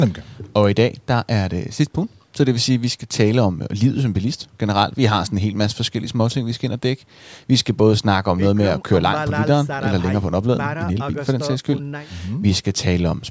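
Nothing stood out on listening to this speech, which carries the usual bandwidth of call microphone processing with nothing above 8 kHz.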